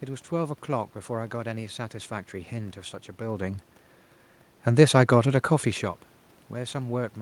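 No technical faults are audible anywhere in the recording.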